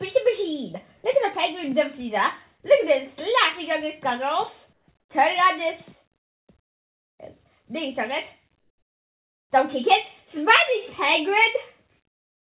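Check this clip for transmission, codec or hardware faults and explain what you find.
The fault here is comfort noise in place of the background, occurring five times through a call path that carries nothing above 4 kHz. The gaps fall at 4.73–4.88 s, 5.00–5.09 s, 6.17–6.47 s, 6.62–7.19 s and 8.60–9.50 s. In each one the natural background gives way to a flat, featureless hiss that sits lower than the real ambience: about 6, 10, 20, 24 and 14 dB down respectively. The likely cause is discontinuous transmission, where the sender goes quiet in pauses and the receiver synthesises noise to fill them. A noise gate would leave near-silence, whereas here a steady, textureless hiss stands in.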